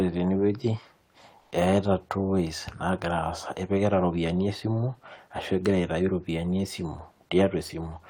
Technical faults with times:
1.39-1.51 comfort noise in place of the background

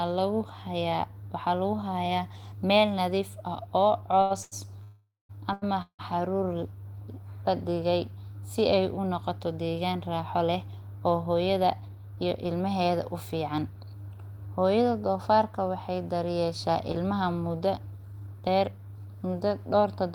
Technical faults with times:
4.21-4.54 short stall from a late packet
4.84-5.31 call audio freeze
5.53-5.64 short stall from a late packet
5.82-6.01 call audio freeze
11.26-12.46 jitter buffer speed-up
16.45-19.07 jitter buffer speed-up
16.92-16.96 short concealed packet loss

